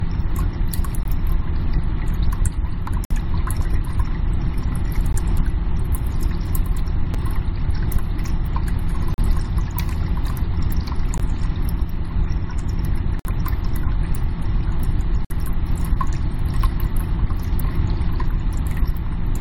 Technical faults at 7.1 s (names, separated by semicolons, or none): gap between stream segments